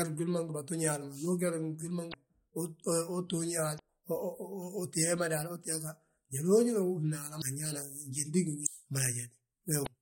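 Damaged data in the compressed stream makes the decoder misread frames, lose sync and hunt for the next valid frame header. The speech breaks into a brief glitch of about 40 to 50 ms at 2.10–2.14, 3.76–3.80, 7.38–7.42, 8.63–8.67 and 9.83–9.88 s.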